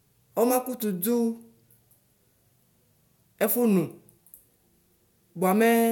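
Listening to the speech recording, nothing stood out as a technical problem at any point.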